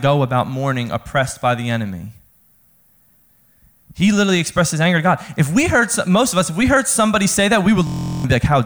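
After "heard somebody say that", 7.87 to 8.24 s, a frozen driver causes a system hang loop. One 23 ms buffer repeats, buzzing steadily at 43 Hz.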